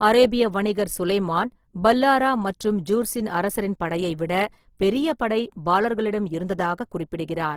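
Throughout, the speech stays full-band to 20.2 kHz but sounds grainy and rough, not swirly like MP3, likely Opus compression filling starved bands with noise.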